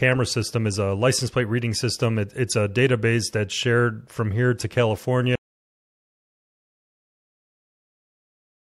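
A brief harsh chirp of noise cuts across the speech from 2.46 to 2.54 s, peaking near -10 dBFS: a corrupt frame decoded, with roughly three damaged frames played despite misread data. At 5.35 s the speech cuts to dead digital silence through to the end, an audio dropout to silence, likely from a lost input while recording continued.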